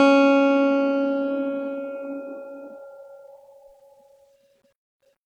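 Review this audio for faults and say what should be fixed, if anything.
Nothing to fix: the music runs without any audible dropout, glitch, distortion or level problem.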